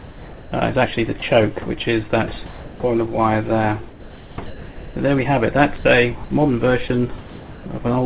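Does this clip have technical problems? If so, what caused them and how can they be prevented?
Yes. At 0.0–0.52, 1.2, 2.46–2.8, 5.78–5.84, 6.24–6.3, 6.88 and 7.18–7.66 s, the sound gives way to steady synthetic noise. This is sound dropped by the voice detector, which likely judged quiet sound as background and sent comfort noise instead. To prevent it, lower the detector's sensitivity threshold or lengthen its hangover time so quiet passages keep being sent.

From 3.9 to 4.96 s, the sound turns choppy, with several holes filled by comfort noise. This is sound chopped by the voice detector, likely caused by the detector switching transmission on and off repeatedly. To prevent it, add hysteresis and hangover to the detector, or turn off discontinuous transmission.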